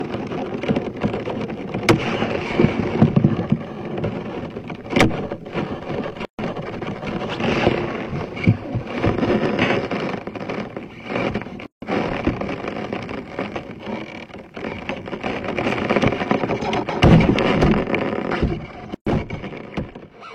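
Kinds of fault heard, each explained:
Gap at a join of encoded pieces: the sound cuts to silence at 6.25, 11.66 and 18.95 s for 121 to 160 ms, with smeared edges, then resumes where it stopped. Separately encoded pieces were joined untrimmed, keeping encoder start delay and end padding.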